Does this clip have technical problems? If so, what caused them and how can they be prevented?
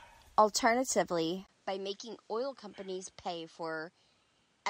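Yes. At 1.47 s the speech goes silent for about 20 ms. From then to the end it is duller, with nothing above 10.5 kHz. It is also about 10 dB quieter, and a new background noise sits roughly 35 dB below it. The likely cause is an input switched to a poorer device. The system dropped to a lower-quality input device mid-recording. To prevent it, lock the recording input to one device and disable automatic switching.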